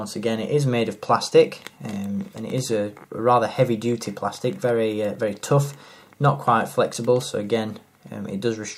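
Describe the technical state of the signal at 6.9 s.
At 6.94 s the program likely failed to fill its output buffer in time, leaving a block of digital silence about 5.3 ms long, which fits a 256-sample buffer. The audio drops straight to silence and back without any fade, so the gap is heard as a tick or dip.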